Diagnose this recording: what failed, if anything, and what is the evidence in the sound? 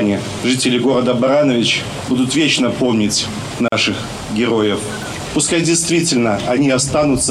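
A codec fault: a gap at a join of encoded pieces. Sound drops to silence from 3.68 to 3.72 s, about 40 ms. Untrimmed encoder delay and end padding remain at the splice.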